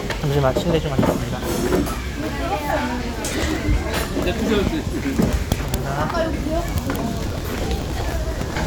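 Processor overload crackle hits at 3.26–3.43 s and again, longer, at 7.27–8.55 s. Short buffers of a few milliseconds keep missing deadlines and get skipped, leaving gritty, tearing crackle over the sound.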